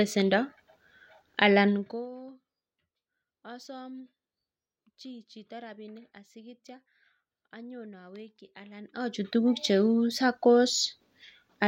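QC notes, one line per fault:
Nothing stood out on listening to this speech recording.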